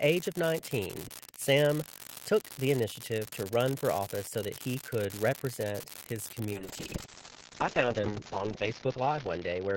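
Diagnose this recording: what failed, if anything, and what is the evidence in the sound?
An unreliable data bit at the converter's digital output runs through the whole speech clip: one marginal data line flips at random, so every error is an identical spike. The resulting steady crackle continues through pauses, which separates it from analogue noise or clipping tied to loudness.

A call bitrate drop begins at 6.54 s and lasts to the end. The network's bandwidth estimate fell, so the encoder went from 32 to 7 kbps, bottoming out for about 2 s, and the audio bandwidth narrowed from 20 kHz to 8 kHz. It sounds rough and muffled, unlike packet loss, which leaves gaps.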